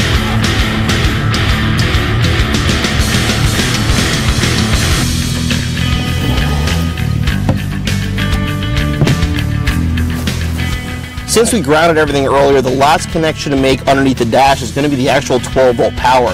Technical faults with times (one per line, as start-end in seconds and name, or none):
0.00-16.34 hard clipping